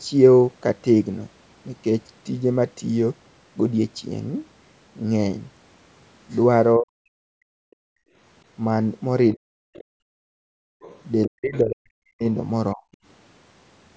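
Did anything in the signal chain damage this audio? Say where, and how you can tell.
Yes. The damage comes from the call processing stage, specifically the echo canceller, which misbehaved in three ways.

Speech suppressed in double talk: at 6.79–7.76 s, 9.35–9.71 s and 11.27–12.85 s the speech sinks by as much as about 40 dB. The likely cause is that both ends were talking at once. The canceller couldn't tell the local talker from loudspeaker echo, so it attenuated everything, carving holes into the near-end speech.

Background gated by the echo canceller: at 8.04–8.16 s the room tone drops by about 23 dB, and at 9.99–10.81 s by about 37 dB, then comes back. While the loudspeaker was active, the canceller's suppressor clamped the microphone hard, leaving audible gaps in the ambience until it released.

Other side's voice leaking through: brief fragments of a second voice appear at 9.74–9.84 s and 12.93–12.97 s, with a longer stretch at 10.81–11.6 s. 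They sit roughly 25 dB below the main speech, and the last one is closer to 40 dB down. This is likely residual loudspeaker echo that the canceller's adaptive filter failed to subtract from the microphone path, so the far end bleeds through in faint scraps.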